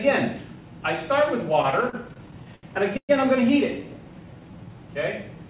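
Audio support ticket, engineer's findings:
Repeated stalls (stutter), 1.62 to 3.11 s. 13 short holds in playback, longest 119 ms, about 329 ms in total. Roughly a fifth of that stretch is concealment. Nothing dropped; the audio drags and stutters instead. Probable component: receiver jitter buffer. Packets arrived late or slower than playout, so the buffer ran dry repeatedly. The receiver stretched the last sound each time, fading it over the longer waits, until data resumed.

Jitter buffer slow-down, 4.19 to 4.77 s. Playback runs at 85% speed, pitch unchanged, sounds drawn out. About 95 ms added. Probable component: jitter buffer rebuilding its reserve, either after running low or after raising its target delay. Mechanism: single pitch periods or slices of pauses repeated many times in a row. Band limit near 4 kHz fits a G.711 mu-law call leg at 64 kbps.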